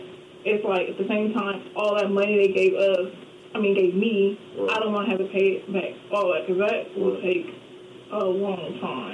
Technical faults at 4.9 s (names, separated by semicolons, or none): none